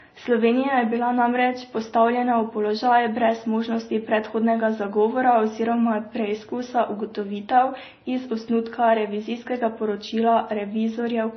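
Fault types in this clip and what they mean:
Transcoding between lossy codecs: the speech was likely encoded at a low bitrate and then re-encoded by a second lossy codec, which fits a low-rate MP3 stage followed by Vorbis. Both sets of artefacts smear together, and nothing remains above about 6.1 kHz.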